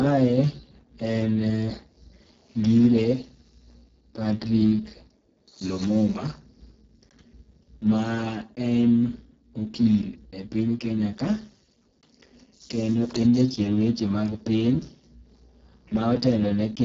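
Speech runs through the Speex codec for its whole length, with heavy damage: the voice sounds hoarse, noisy and edging on robotic, which fits a bitrate near 6 kbps. Nothing remains above 7.8 kHz, and the upper band is only shaped, hissy fill rather than real detail, unlike the clean low-pass of a narrowband telephone codec.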